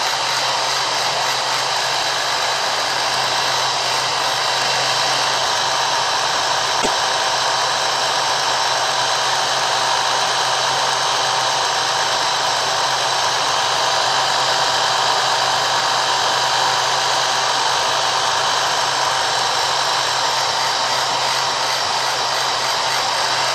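Damaged data in a compressed stream, 6.78 to 6.88 s: corrupted bytes make the decoder misread frames and lose sync, producing a brief glitch in the sound.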